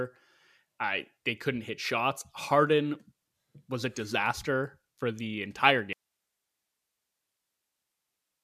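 At 5.93 s the speech cuts out abruptly and stays gone to the end: an audio dropout to a faint residue. Only hiss remains, roughly 55 dB below the signal, which points to the source likely being lost while the downstream path stayed live.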